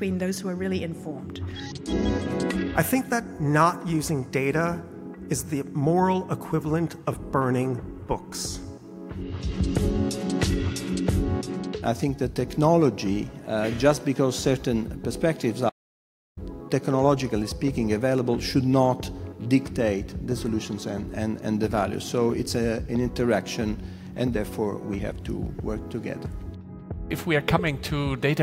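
The audio has an audio dropout to silence from 15.70 to 16.37 s: sound cuts off abruptly and returns 0.67 s later, with no room tone in between. The waveform shows a flat line of silence, and the spectrogram a fully blank strip, likely from a brief input or link loss.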